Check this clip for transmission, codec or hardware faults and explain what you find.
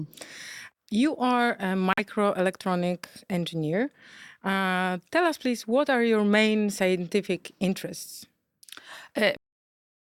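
Two faults stand out in this speech recording: a brief muted gap near the start and an abrupt ending.

From 1.93 to 2.00 s the speech drops out into a silent hole about 66 ms long that begins with no fade, and the speech then resumes on schedule with no time lost. This is a corrupt frame muted: bit errors damaged compressed frames, the decoder rejected them, and the player substituted silence. The length fits two frames of roughly 33 ms each.

At 9.37 s the audio is cut off in the middle of a sound. It falls straight to digital silence with no natural decay and stays silent to the end of the file. This is a cut-off end: the final buffers were never written out or played, so the recording simply stops where the data ran out rather than finishing the sound.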